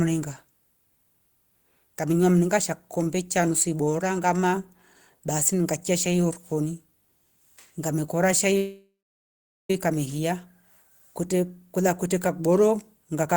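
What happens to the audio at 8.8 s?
That's a call audio freeze from 8.57 to 9.70 s. After "ngamekora shai" the last sound smears into a fading buzz, then about 0.8 s of silence. It's likely a jitter buffer running dry while packets were held up. It resumes at "weka mehia" with nothing lost, just 1.1 s later.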